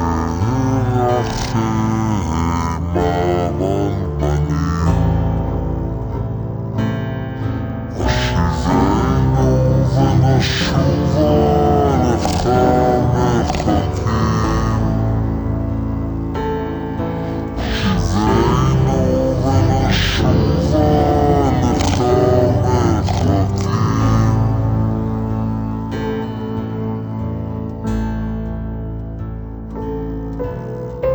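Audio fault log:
throughout, stereo read as mono: interleaved left and right samples are being played back as one channel, so everything runs at half speed and a full octave low. A spectrogram shows the content squeezed downward, with a fainter mirrored copy in the upper half.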